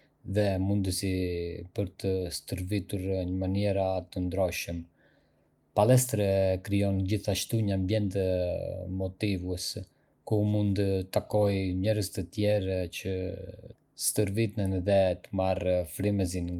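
A speech recording with no technical faults to point to. There is nothing here that needs a time, a value or a cause.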